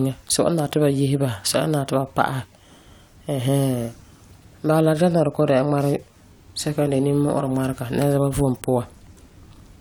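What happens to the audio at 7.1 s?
Nothing goes wrong at 7.1 s; the speech carries on intact through that moment, with no dropout, click or other fault.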